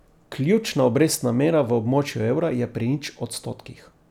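Nothing in this bit of speech stands out as a technical problem; there's no glitch or dropout to point to anywhere along the way.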